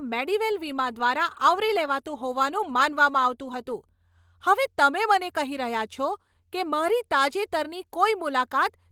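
The speech has no technical faults, and its Opus voice compression at 24 kbps in hybrid mode keeps the full audio band, with content reaching up to about 20.3 kHz.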